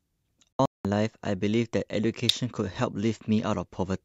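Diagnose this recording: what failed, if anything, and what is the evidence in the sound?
The speech cuts to silence from 0.53 to 0.85 s in several short holes totalling about 256 ms, the longest 192 ms. This is a digital broadcast dropout: the receiver lost frames or rejected them on checksum and muted, which fits roughly eight 32 ms frames lost.

A sharp snap sits on top of the speech at 2.29 s, too brief to be part of the sound itself. An electrical switching spike is the likely cause, with a nearby switch or static discharge arcing and the analogue wiring picking up the burst.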